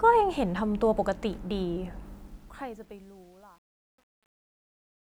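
Truncation distortion on a fade runs from 2.06 s to the end of this speech clip at 5.14 s, during a fade-out that begins around 2 s. From 2.45 s onward the tail turns gritty as the level sinks toward the smallest available step. The coarseness points to a fade or volume stage that keeps only about 9 bits without dither, so the quiet waveform collapses into a few square steps.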